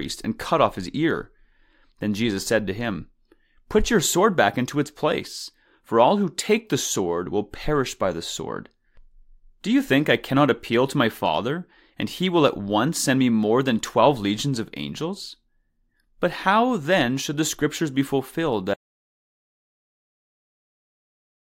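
A speech clip, and right at 18.74 s the audio drops out to silence and stays that way through to the end, roughly the last 2.7 seconds. It's plain silence, no room tone at all, so the input was most likely lost, maybe a disconnected device or a stray mute.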